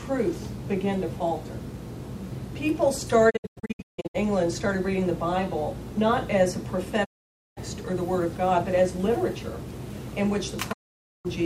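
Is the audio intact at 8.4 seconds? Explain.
Yes, at 8.4 seconds the audio plays through cleanly with no dropout, glitch, click or other break in the signal.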